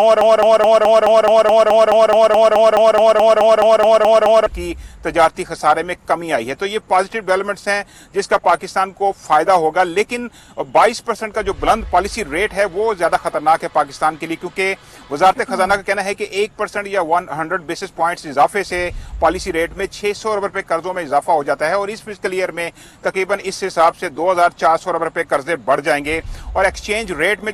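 From the very start the audio is already caught in a broken-record loop, which runs until 4.46 s. A fragment of about 213 ms repeats identically, back to back, some twenty times, giving a stuttering, mechanical pulse at roughly five cycles per second. The likely cause is a stalled player, encoder or stream that kept resending the last fragment it held. Whatever should have played during those 4.46 seconds is missing.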